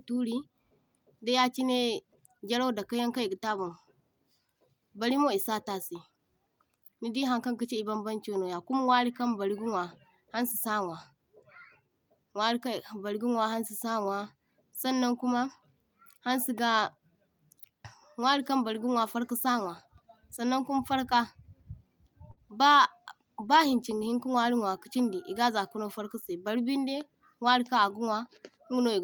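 At 22.31 s a burst of packet loss interrupts the speech for about 74 ms, until 22.39 s. Several consecutive packets failed to arrive in time, so the receiver extended the last received sound for roughly 54 ms while fading it down. About 60 ms of speech never plays, and the audio jumps ahead. On a spectrogram the final frame's pattern is frozen and dimming, then cuts to unrelated content; the waveform shows a repetitive, shrinking stretch.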